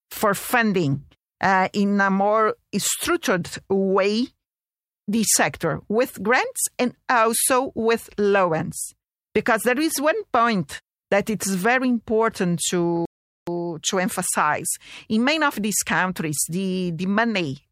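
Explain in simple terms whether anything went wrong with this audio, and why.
At 13.05 seconds the speech suddenly cuts to silence. It stays silent for about 0.42 seconds, until 13.47 seconds, then carries on. This is a playback stall. The player likely ran short of data or was held up, so nothing came out.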